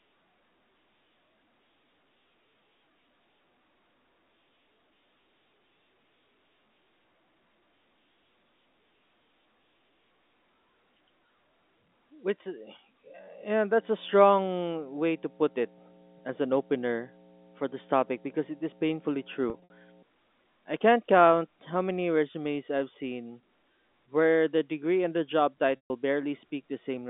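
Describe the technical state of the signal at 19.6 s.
At 19.6 s two things overlap. A mains hum has been running since about 13.7 s and lasts until about 20.0 s. It's a steady 60 Hz tone, likely from a ground loop or a nearby transformer leaking the power line into the signal. It sits roughly 15 dB under the speech, so it's clearly audible as a low drone under everything in that stretch.

Right on top of that, between 19.5 and 19.7 s, there's packet loss with pitch repetition. About 120 ms of audio went missing in bits scattered across that 200 ms window, and the longest single gap is around 60 ms, which fits a few consecutive short packets dropped at once. The receiver covered each hole by looping the last pitch period and fading it out, so you hear the speech briefly stick on a buzzy, held tone, dip, and then cross-fade back in, all with the hum still underneath.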